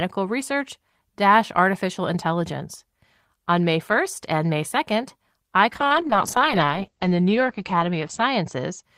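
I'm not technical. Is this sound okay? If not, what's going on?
No. From 5.73 s to 8.89 s there's a call bitrate drop: the speech keeps flowing without gaps but turns rough, watery and duller, because the call briefly squeezed its data.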